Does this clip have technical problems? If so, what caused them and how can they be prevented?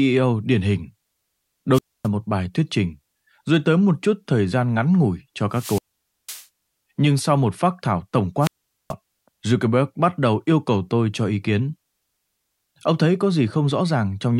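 Yes. Wireless microphone squelch dropout hits at 1.72–2.08 s, 5.51–6.46 s and 8.40–8.94 s. Hiss rises, then the speech falls to near silence for 0.26, 0.50 and 0.43 s. The radio signal faded until the receiver's squelch muted it. Keep the transmitter close to the receiver antennas, in line of sight.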